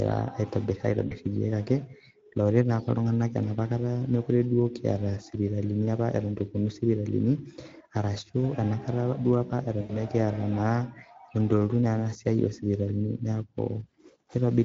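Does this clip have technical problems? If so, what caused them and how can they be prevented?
Yes. The speech is coded with the Speex codec, and the damage is plainly audible throughout: hoarse, grainy and a bit noisy. Too few bits go to the excitation, which fits a bitrate around 17 kbps. Using a higher Speex quality setting or a modern codec like Opus would prevent it.

There's also VoIP packet loss concealed by the speech codec at 1.07 to 1.15 s (about 40 ms) and 9.81 to 9.96 s (about 80 ms). The decoder stretched its last pitch and filter into a fading buzzy tone or coloured noise, and the voice stays weak briefly afterwards. A more stable network path or forward error correction would help.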